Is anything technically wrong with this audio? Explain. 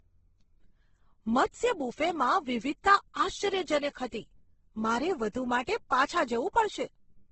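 Yes. Throughout the speech there is a hard ceiling at 8.2 kHz, with nothing above it, and the remaining band carries two different kinds of coding damage heard together. This points to transcoding between lossy codecs, likely Vorbis at around 21 kbit/s followed by Opus at around 16 kbit/s. The second encoder spends its few bits re-encoding the first one's artefacts and adds its own. A spectrogram shows an abrupt empty region above 8.2 kHz and blotchy, patchy harmonics below it.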